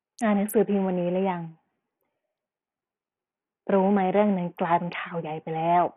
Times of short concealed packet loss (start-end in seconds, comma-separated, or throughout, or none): none